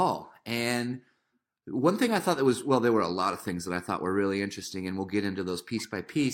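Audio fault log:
No technical faults can be heard anywhere in this speech clip.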